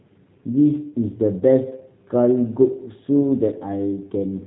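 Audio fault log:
Throughout, G.729 codec: speech is rebuilt from a vocal tract filter, pitch predictor and sparse pulses, fitting 8 kbit/s G.729A, so nothing above 4 kHz remains and it sounds rough and synthetic.
1.39–1.43 s and 3.21–3.26 s, VoIP packet loss concealed by the speech codec: gaps of roughly 20 ms and 10 ms are filled from the last pitch and filter, leaving brief buzzy or noisy, fading sound, with the voice weak or distorted just after.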